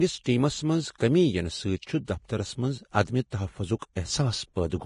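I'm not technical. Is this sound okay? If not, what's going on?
No. Throughout, the speech sounds hissy and grainy, with a dull top end where nothing above about 10.5 kHz remains. The likely cause is heavy Vorbis compression: to save space, the codec rounded off fine high detail so roughly that it turned into noise.

Three times, a brief hiss comes just before a sharp sound, which then starts soft and smeared: at 0.96 to 1.00 s, 3.30 to 3.32 s and 3.79 to 3.82 s. This is pre-echo. The codec spread the noise from each loud onset backwards into the quiet moment before it.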